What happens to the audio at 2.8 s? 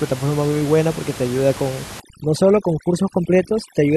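At 2.8 s the gaps between sounds fall to near silence flecked with twinkling specks. This is overdone noise removal, running from 2.00 s to the end at 3.97 s. The noise reducer is set too aggressively for a room bed sitting only about 15 dB under the speech. It drives individual frequency bands down whenever they come close to its noise estimate, stripping away the quieter parts of the speech along with the room noise.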